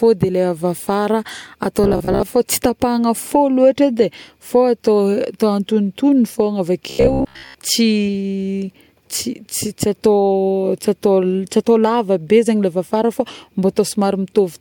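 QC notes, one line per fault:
1.84–2.23 s and 6.90–7.58 s, robotic sound from repeated short buffers: a rigid, metallic buzz at 66.7 Hz, likely from repeating 15 ms buffers, covering about half, then most, of each span. It differs from stutter because the buzz stays at a fixed rate.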